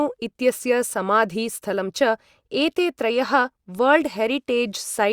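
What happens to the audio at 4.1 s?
Nothing goes wrong at 4.1 s; the speech carries on intact through that moment, with no dropout, click or distortion.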